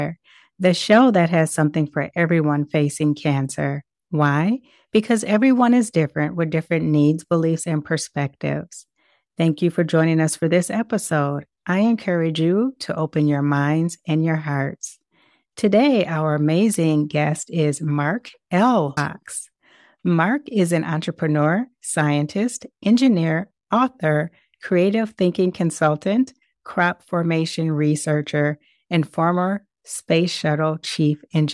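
No technical faults are audible anywhere here.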